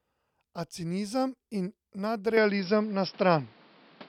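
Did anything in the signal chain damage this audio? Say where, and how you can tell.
Yes. At 2.37 s the speech abruptly loses everything above 5.6 kHz, shifts level by around 5 dB and gains a new noise floor roughly 30 dB down, with no gap. That is likely the input switched to a poorer device at the driver stage. A codec bandwidth drop would not also change the level and background noise.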